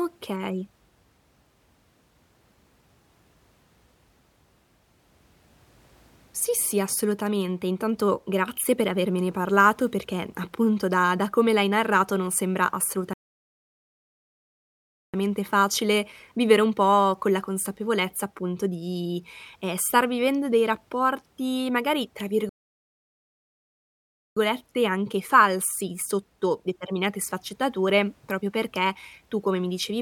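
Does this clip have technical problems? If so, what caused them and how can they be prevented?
Yes. The speech has two playback stalls. Audio cuts to silence after "l'hai narrato non sembra" from 13.13 to 15.14 s, and after "dei rapporti magari tra" from 22.49 to 24.37 s. Each gap lasts about 2 s, then speech resumes. The player likely ran short of data or its thread was blocked. A larger playback buffer and a higher-priority audio thread would prevent this.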